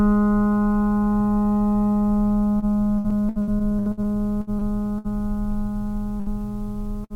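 From 2.59 to 5.13 s the music suffers repeated packet loss, giving a choppy, robotic quality. About a dozen short holes, the longest around 66 ms, are each patched by extending the preceding sound. That covers roughly a fifth of the stretch, and about 420 ms of the actual music is lost. On a spectrogram this shows as repeated short blocks of smeared, flattened harmonics, and the waveform has small sections of copied cycles.

A burst of packet loss follows at 6.20 to 6.29 s, and another at 7.04 to 7.13 s. In each, the last sound is stretched into a fading buzz or hiss lasting about 60 ms, and then the music picks up further on with around 60 ms skipped. The waveform shows a decaying, repetitive section ending in an abrupt jump. On a spectrogram, frozen partials fade out and give way to a discontinuity.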